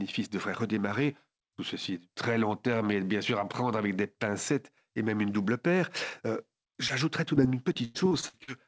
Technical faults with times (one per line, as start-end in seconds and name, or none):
6.88-6.91 short concealed packet loss
7.35-8.49 repeated packet loss (robotic sound)